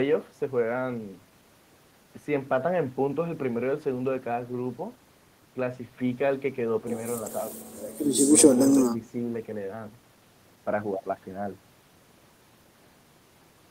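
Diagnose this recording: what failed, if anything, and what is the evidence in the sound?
Nothing in the recording points to a failure at any stage of the chain. The speech comes through with no audible event that would mark a problem.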